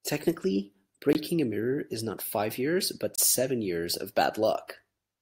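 At 1.13 to 1.15 s and again at 3.16 to 3.18 s, the speech cuts to hard-edged silence for 20 ms and 24 ms. These are gaps between stream segments. Timestamps of adjacent 2 s segments fail to meet, so the player pads with silence, though no audio is lost.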